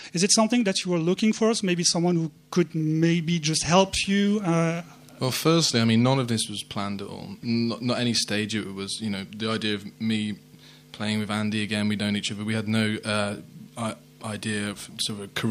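No technical faults are audible anywhere in this recording.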